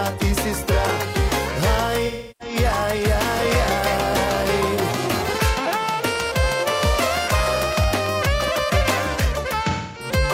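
Two stretches of AAC frame loss with concealment show up, from 2.06 to 2.55 s and again from 9.70 to 10.10 s, about a third and a quarter of a second long. The decoder patches the gaps from the last good spectrum, so the audio goes smeared and noisy there. Between 2.97 and 8.07 s there's a train of clicks, roughly fifty near-identical ticks at a steady 8.8 per second, sitting around 10 dB above the sound and ticking through the quieter moments too. The likely culprit is electrical interference or a faulty connection.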